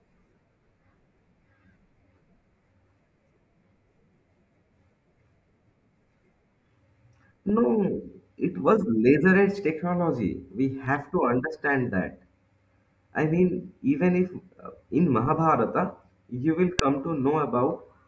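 This speech clip has a single sharp, loud click at 16.79 s, right after "you will". It is a file header played as audio: a joined WAV piece kept its header, and those few dozen bytes were reproduced as samples, snapping regardless of the speech.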